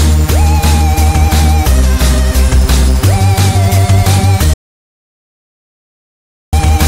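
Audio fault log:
4.54–6.53 s, audio dropout to silence: the sound breaks off abruptly at 4.54 s and returns just as suddenly at 6.53 s, leaving close to 2.0 s of complete silence with no room tone or noise floor underneath. That dead-flat gap is most likely the input being lost, through a disconnected device, a failed link or a mute, while the recorder kept writing silence, so whatever occurred in those two seconds is gone.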